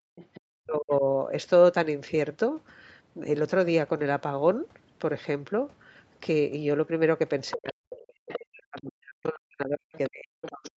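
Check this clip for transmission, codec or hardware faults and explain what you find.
Two echo-canceller problems stand out, clustered at the start and across the last three seconds. The band stops at 8 kHz, which fits the call's microphone processing and a wideband Opus stream.

Speech suppressed in double talk: from 0.00 to 1.03 s, and again from 7.52 s to the end, the talker's level sags and breaks into gaps, at worst by about 40 dB. In the opening second roughly half a second is affected. This is likely the echo canceller hearing both sides at once, failing to tell its own talker from the loudspeaker echo, and turning everything down.

Other side's voice leaking through: a second voice surfaces at 0.16–0.41 s (about 25 dB under the talker), 7.51–7.72 s (about 15 dB under), 8.29–8.81 s (about 20 dB under) and 9.95–10.71 s (about 15 dB under). It is likely the far end played on the talker's loudspeaker, picked up by the microphone and only partly removed by the canceller, so scraps of it get through in the same stretches where the talker is being pushed down.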